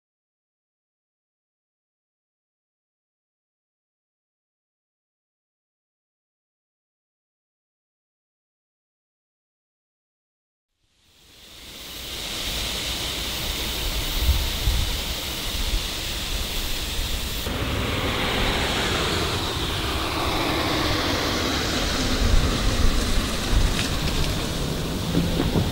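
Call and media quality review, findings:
DAB burbling, 19.13–19.40 s and 23.20 s: short noise blips. Bit errors slip past error correction into MP2 audio data, so single sub-bands get noise blips. The spectrogram shows isolated bright band blocks.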